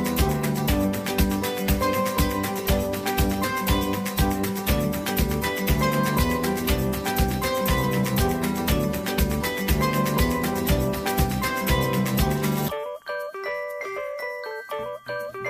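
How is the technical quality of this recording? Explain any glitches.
No technical faults are audible in this recording.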